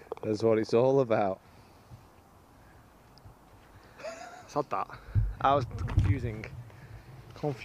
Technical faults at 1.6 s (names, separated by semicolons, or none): none